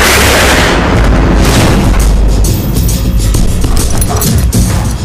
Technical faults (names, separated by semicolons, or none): hard clipping